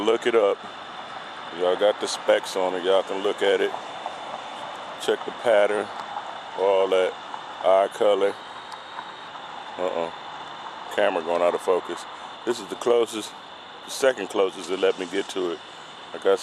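Between 8.24 and 9.28 s the whole clip jumps about 5.4% fast and goes sharp by roughly 91 cents, close to a semitone, then snaps back. It sounds like a drift correction step, likely from clock-matching software briefly changing the playback rate to rebalance its buffer.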